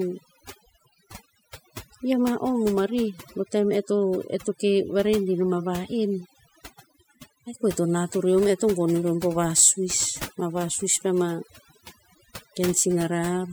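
Overdone noise removal runs throughout the speech. The noise reduction was set so hard that frequency bands near its noise estimate are pulled far down or cut out, taking quiet voice detail with them. Pauses fall to near silence dotted with twinkling specks.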